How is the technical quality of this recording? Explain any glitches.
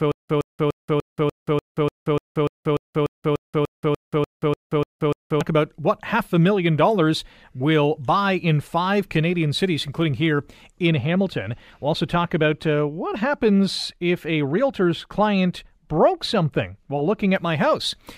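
The recording has two clear technical faults, one at the start and one in the second half.

From the very start until 5.41 s there is a stutter with silent gaps. A 116 ms fragment of speech repeats 18 times, each followed by 178 ms of digital silence, so it returns about every 295 ms. The likely cause is a stalled player replaying its last buffer on each retry. Unlike plain dropouts, the same fragment keeps coming back.

From 10.87 to 17.36 s, de-emphasis applied wrongly leaves the speech dull and muffled. The treble falls smoothly, about 8 dB lower at 10 kHz than at 1 kHz. The gradual slope, not a sharp cutoff, sets it apart from a low-pass filter or a bandwidth-limited codec.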